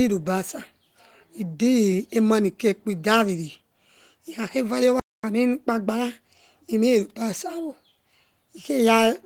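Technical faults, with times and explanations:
4.996 to 5.236 s, playback stall: the speech cuts to silence for about 240 ms, likely because the player ran short of data, then resumes where it stopped.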